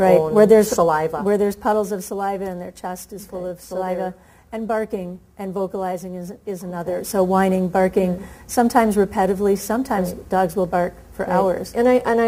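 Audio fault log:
6.76–7.08 s, zipper noise: the level moves about 10 dB in unsmoothed 1 dB steps, around 30 a second, so each jump clicks into a quick zipping tick.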